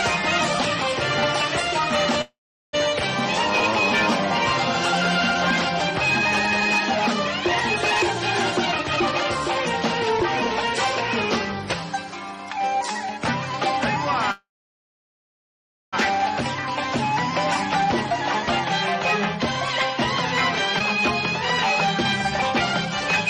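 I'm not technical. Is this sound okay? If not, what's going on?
No. There are three kinds of problems.

Call audio freeze, at 2.21 to 2.75 s and at 14.31 to 15.95 s. The sound stalls, fades, then mostly goes silent. It resumes where it stopped, with nothing lost. The stalls last about half a second and about 1.6 seconds. The likely cause is data held up on the network.

Jitter buffer speed-up, from 8.59 to 10.23 s. The sound plays about 13% faster at the same pitch. The receiver trims tiny pieces to catch up, roughly a fifth of a second in total.

Skip ahead, at 20.79 to 20.82 s. The sound jumps forward almost without a gap. Roughly half a second is simply missing.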